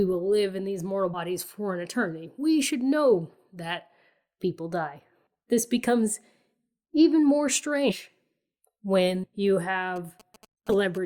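Speech recording with two kinds of fault. Compressed frames are skipped at 1.13, 7.89, 9.23 and 10.69 s. At each point the speech jumps forward by whole 20 ms frames, about 70 ms, 200 ms, 300 ms and 200 ms respectively. GSM signalling bursts run from 9.96 to 10.98 s. A nearby 2G phone's intermittent transmission is rectified by the audio circuit, producing a galloping dit-dit-dit of short 217 Hz buzzes about 25 dB below the speech.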